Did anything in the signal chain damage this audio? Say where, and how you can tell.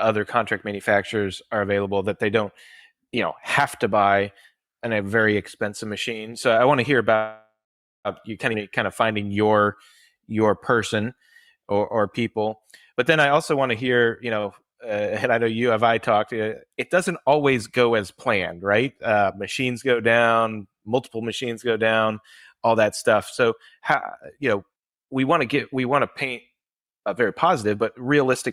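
Yes, and it all happens at the network and jitter-buffer stage. From 7.15 to 8.08 s the sound hangs: the last bit is carried on as a fading buzz, then about 530 ms of silence, and it resumes where it stopped. That's a call audio freeze, likely from packets held up in transit.

Right after, at 8.53 to 8.57 s, there's a skip ahead: playback jumps forward roughly 400 ms with barely a join. A chunk of audio was dropped, in transit or by the buffer, while later audio was already waiting.

From 8.58 to 12.57 s the jitter buffer slow-down kicks in. Everything runs at 93% speed with the pitch unchanged, and sounds get drawn out. The receiver repeated pitch periods, adding 303 ms of padding to rebuild its reserve.

Then it goes the other way. From 12.92 to 14.37 s a jitter buffer speed-up pushes the audio to 117% and trims roughly 300 ms, so it sounds hurried. From 22.55 to 28.51 s it does the same more gently, at 108%, cutting about half a second by snipping out short pitch-period pieces.

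At 14.41 to 14.46 s there's a short stall from a late packet. A 29 ms stretch of the last sound is held over, with a slight buzz or dip, and it picks up from the same spot. Nothing is lost, but there's a tiny hitch in timing.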